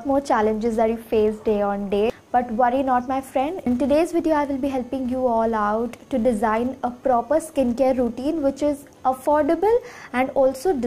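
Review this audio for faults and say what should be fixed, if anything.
A filter restarted on every block runs through the whole clip as a steady buzz at 172 Hz, which fits a 256-sample block. Because the filter forgets its state at each boundary, every block starts from silence and begins with a small transient. Unlike mains hum, this buzz rises and falls with the signal's level, and unlike dropout clicks it never breaks the sound itself. Carry the filter's internal state over from one block to the next instead of resetting it.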